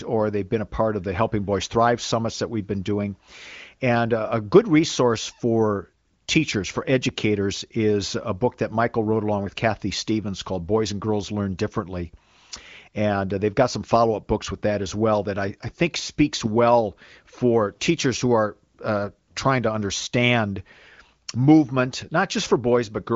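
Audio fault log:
No faults are audible: the speech carries the AMR wideband (HD Voice) codec at a rate that fits its 23.05 kbit/s mode, with at most faint coding colour and nothing above 7.4 kHz.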